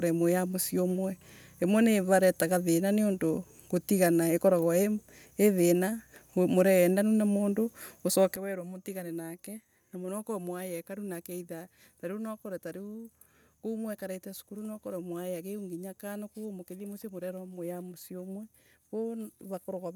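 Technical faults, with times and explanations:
8.36 s to the end, sudden gain jump: the speech and its background noise drop together by about 12 dB in a single step and stay there, likely because a digital gain setting or bit shift was applied instantly rather than ramped.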